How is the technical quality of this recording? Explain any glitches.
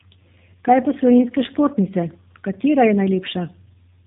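The quality is limited by one fault, present for the whole clip: tandem speech coding.

Throughout, the speech has been passed through two low-rate speech codecs in succession, with a plain telephone-band link between them. The character fits AMR-NB at roughly 10 kbit/s followed by G.729A at 8 kbit/s. Each coder models the previous one's output, so their errors compound. The result is rough, muffled and warbly speech, with nothing above 3.8 kHz.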